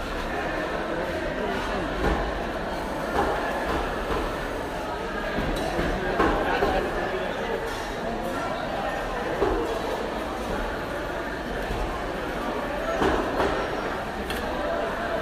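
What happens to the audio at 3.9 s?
A hard, raspy buzz sits over the audio at 3.9 s, part of a steady stretch running from 2.74 s to 4.86 s at about 22 dB below the sound itself. This is GSM phone buzz. A nearby 2G phone on a call transmits in radio bursts 217 times a second, and the audio circuitry rectifies those pulses into a 217 Hz tone rich in harmonics, unrelated to the material being recorded.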